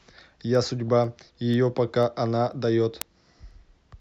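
From 0.30 s to the end, word clock ticks recur roughly every 0.3 s, about fifteen in all. An unlocked receiver clock, around 100 ppm off, drops or repeats one sample each time.

At 0.88 s a short burst of DAB burbling sounds over the speech. Bit errors, around a tenth of a percent, slipped past error correction and put short blips of noise in single sub-bands.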